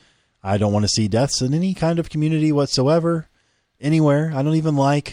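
Nothing in the speech stood out as a technical problem on listening.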